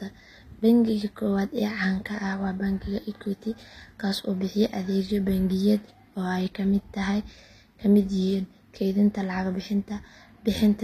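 From start to finish the speech carries likely HE-AAC compression at a low bitrate near 24 kbps. The treble is rebuilt from copied lower bands and stops near 14.9 kHz, so sibilants sound gritty and metallic.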